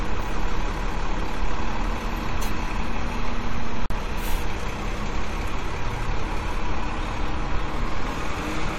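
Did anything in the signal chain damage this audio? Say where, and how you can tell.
Yes: a gap at a join of encoded pieces, from 3.86 to 3.90 s. A gap of about 45 ms cuts into continuous sound with smeared edges, then the sound resumes where it stopped. Separately encoded pieces were joined untrimmed, keeping encoder delay and last-frame padding.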